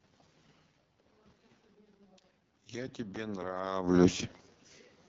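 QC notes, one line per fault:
Throughout: AMR wideband (HD Voice) codec, heavily damaged at what sounds like the 6.6 kbit/s mode, the lowest AMR-WB rate. Nothing is present above 7 kHz. The speech has a rough, raspy quality because the pulse-driven vocal tract model has too few bits to describe the excitation accurately, so the fine structure of the voice is replaced by a coarse approximation. The top band is filled with shaped noise rather than real signal. The level shifts around 0.5 s and 3.5 s come from the talker moving.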